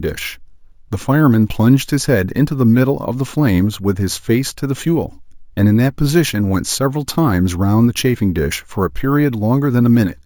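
The speech recording was brought up to a higher sample rate by simply holding each original sample, with no smoothing filter afterwards, and the pattern of the result fits a step from 16 kHz to 48 kHz. The outcome is imaging from sample-and-hold upsampling throughout the clip: mirrored copies of the speech spectrum sit above the original band, the first filling roughly 8 to 16 kHz at about 22 dB below the speech. This adds a bright, metallic fizz that rises and falls with the talker's level, and its lowest image moves against the direction of any pitch change.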